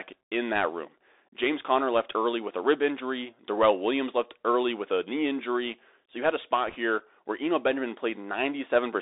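From start to finish the speech runs through a Bluetooth CVSD headset codec, which encodes one bit per sample that only nudges the level up or down. The band sits between 300 Hz and 3.7 kHz. Fast, bright sounds outrun the adapting step, so sibilants turn scratchy over a granular hiss. Unlike ordinary narrowband telephone filtering, it adds this slope-overload grit, which fits a 64 kbps link.

From 6.67 to 6.75 s, just before "here where", bit errors on the Bluetooth voice link flip bits at a rate of roughly one percent. Each flipped bit carries little weight and its effect dies away, so this is a short rushing crackle with no sharp, loud clicks of the kind PCM bit errors or dropouts produce.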